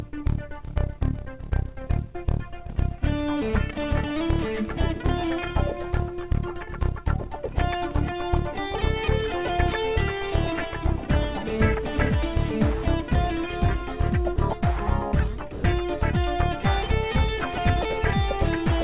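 At 14.36 s and again from 15.52 to 15.64 s, the sound briefly gives way to flat comfort noise, a 20 ms blip and then a 120 ms gap. That's likely sound dropped by the voice detector, which mistook the material for background, all over a narrowband call path that cuts everything above 4 kHz.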